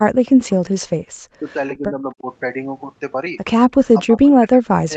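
From 0.06 to 1.02 s the speech sinks hard, down by something like 40 dB at worst, likely speech suppressed in double talk as the echo canceller ducks everything. It happens again, more gently, from 1.77 to 2.26 s. At 3.71 to 3.76 s there's a faint echo leak, a quiet copy arriving 263 ms late, probably around 30 dB under the speech. From 3.91 s to the end the suppression returns, with dips of about 30 dB.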